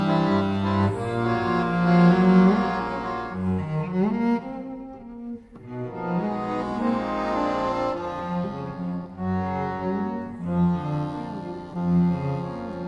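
No technical faults can be heard anywhere in this audio. Nothing in it points to a problem with how it was captured, processed or delivered.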